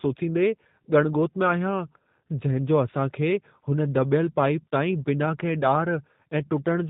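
Throughout the clip, the speech has passed through the G.729 codec, which rebuilds each 10 ms frame from a vocal tract model, a pitch predictor and a few pulses. Nothing above 4 kHz survives, leaving the speech narrow, rough and plainly synthetic, consistent with an 8 kbit/s stream.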